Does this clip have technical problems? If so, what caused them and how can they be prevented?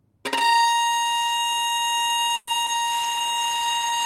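Yes. From 2.35 to 2.49 s there is a call audio freeze: the sound stretches into a fading buzz for about 120 ms, then resumes exactly where it stopped. It was likely caused by delayed packets draining the jitter buffer. Unlike packet loss, nothing is lost; the audio simply arrives about 120 ms late. A larger adaptive jitter buffer and a steadier network path would prevent it.

From 2.65 to 2.80 s there is short concealed packet loss. About 20 ms of audio never arrived, and the gap was patched with a brief synthesized smear. This differs from the freeze because the material is actually gone rather than delayed. Forward error correction or redundancy in the codec would guard against it.

From 2.93 s to the end comes a call bitrate drop from 32 to 18 kbps. The sound turns rougher and stays that way instead of recovering, which sets it apart from a momentary glitch. More bandwidth headroom, or a higher minimum bitrate setting, would prevent it.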